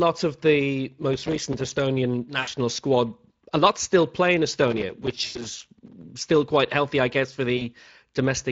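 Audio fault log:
throughout: Speex codec. Low-bitrate CELP coding, which fits a setting near 20 kbps, starves the excitation, so speech sounds noisy and hoarse.
1.14–1.77 s and 4.68–6.03 s: processor overload crackle. Dozens of short buffers, which fits about 3 ms each, missed their deadlines again and again and dropped to silence. This leaves gritty tearing until the load eases before "still quite healthy I".
2.39–2.48 s, 5.25–5.48 s, 7.57–7.65 s: VoIP packet loss concealed by the speech codec. Gaps of 80 ms before "squad a lot still", 100 ms inside the second crackle, and 40 ms after "healthy I guess for" are filled by extrapolated, fading sound.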